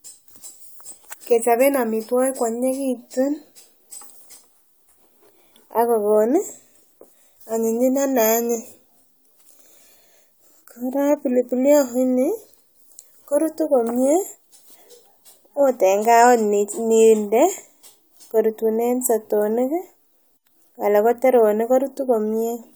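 No technical faults can be heard anywhere in the recording, and the signal holds steady throughout.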